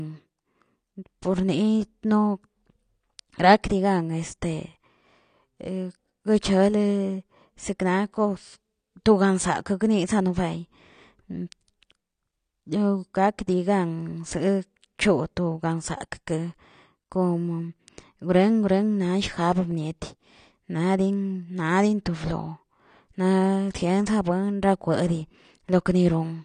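From start to finish the speech has a dull, smeared quality, with a warbly, fizzy texture on sustained sounds and sibilants, and nothing at all above 9.7 kHz. That's most likely AAC compression, the AAC-LC flavour, pushed hard enough that the damage is plainly audible, which fits a low bitrate around 32 kbps. Starved of bits, the encoder drops the top of the spectrum and coarsely quantises what's left, so fine detail turns into that swirly haze.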